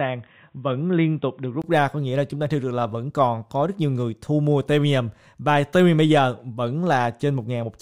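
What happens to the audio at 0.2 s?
At 0.2 s the sound is dull and boxy, with nothing above 3.8 kHz, a faint added noise floor and no change in level; this lasts from the start to 1.64 s, ending in a 20 ms gap. The likely cause is an input switched to a poorer device whose narrower band sets this muffled tone.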